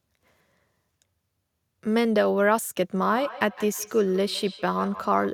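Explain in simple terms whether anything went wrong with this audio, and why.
Feedback echo between two devices, from 3.07 s to the end: another device replays the sound into a microphone, so it comes back roughly every 150 ms.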